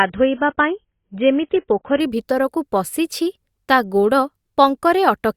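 From 0 to 2.0 s, an adaptive stream starting at a low bitrate leaves the speech dull and watery, with nothing above 3.8 kHz, which fits 16 kbit/s AAC. At 2.0 s the spectrogram's ceiling leaps upward, suggesting a switch near 96 kbit/s, with no waveform gap.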